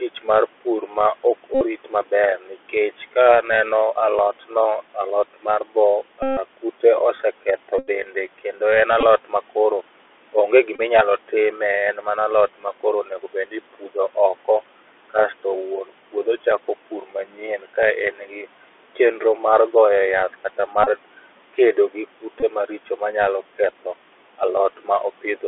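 Throughout, the call runs through the Bluetooth CVSD headset codec, whose one-bit adaptive-step coding at 64 kHz and telephone band of roughly 250 Hz to 3.5 kHz leave the sound dull, with scratchy sibilants and an audible granular hiss over faint room noise.

From 0.0 to 3.44 s, speech cut by the noise suppressor begins: the suppressor mistakes parts of the speech for background and pulls them down by up to about 12 dB, swallowing soft endings for roughly a third of a second in all. Inside that span, at 1.55 to 1.62 s, comes the first Bluetooth headset packet repeated. Packets were lost on the radio link and the chip replayed the last one every 3.75 ms, producing a brief buzz near 267 Hz. The suppressor returns from 4.4 to 14.46 s, again cutting by up to about 12 dB for around 0.7 s in total. The repeated-packet buzz recurs there at 6.23 to 6.38 s (the longest, about 0.15 s), 7.79 to 7.88 s, 9.01 to 9.03 s and 10.76 to 10.81 s. 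From 17.36 to 18.96 s, after "puodho chako pur" and before "chenro mag goye yath", the suppressor dips the speech by up to about 8 dB. After "chenro mag goye yath", from 20.57 to 25.42 s, it cuts by up to about 11 dB, while short buzzes from repeated packets sit at 20.84 to 20.89 s and 22.40 to 22.44 s.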